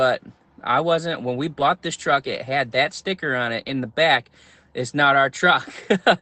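At 1.59 s, just before "this truck it had", and at 3.73 s, between "that sticker on it" and "the back it's not", a lost packet rebuilt from error correction leaves a brief 20 ms rough, noisy patch instead of a gap.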